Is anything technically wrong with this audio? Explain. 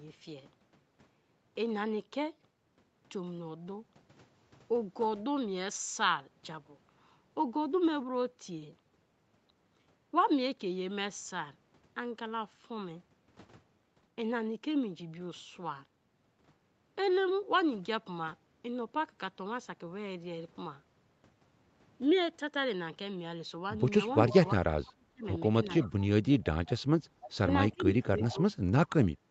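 Yes, the last five seconds of this speech show two call-path faults.

Echo leak: brief scraps of a delayed voice copy at 24.28, 27.22 and 28.23 s, about 15 to 20 dB below the speech and lagging by 340 ms. This is likely a far-end loudspeaker whose echo canceller let residual pickup return down the line.

Speech suppressed in double talk: from 24.56 to 25.25 s, 25.83 to 26.46 s, and 27.71 to 29.21 s the talker's level dips sharply, by up to about 30 dB. This is likely an echo canceller that could not tell overlapping talk from echo, so it attenuated both.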